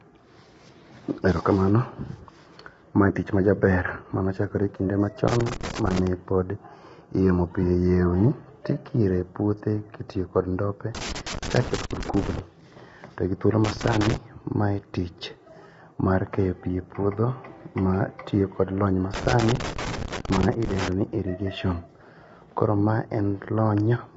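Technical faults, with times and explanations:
Throughout: low-delay AAC compression. The speech sounds rough and grainy, with noise filling the gaps between the voice's harmonics and nothing above 7.7 kHz. This is likely AAC-ELD at 24 kbps, the low-delay codec used for video calls. Its short frames cannot resolve pitch harmonics finely, and each frame costs extra bits. At this low rate the damage is plainly audible.
5.28 to 6.07 s, 10.95 to 12.39 s, 13.64 to 14.16 s and 19.14 to 20.92 s: loose connector crackle. Irregular bursts of scratchy crackle break into the speech. The first comes after "manochakore kinde" and ends before "pod yiemo". The second follows "kod ndope". A worn or dirty contact is making and breaking as it moves, chopping the signal on and off. Any DC on the line adds pops at each break.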